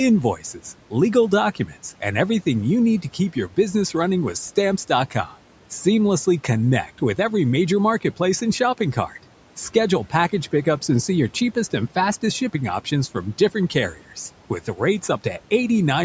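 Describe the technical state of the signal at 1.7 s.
At 1.7 s the signal is inside a stretch of speech cut by the noise suppressor, running from about 1.55 to 1.74 s. The suppressor mistook part of the speech for background and turned it down with the room noise, which sits about 21 dB below the speech, cutting as much as about 7 dB. Around a tenth of a second of sound is affected, so the quieter parts there come across thinned and swallowed.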